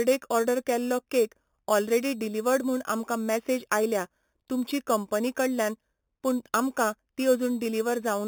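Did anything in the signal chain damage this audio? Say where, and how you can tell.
Yes. Throughout the speech there is imaging from sample-and-hold upsampling at the rate-conversion stage: an 8 kHz signal was raised to 48 kHz by repeating samples unfiltered. A metallic fizz sits at 4 to 8 kHz, about 16 dB down, tracking the speech level, unlike steady hiss.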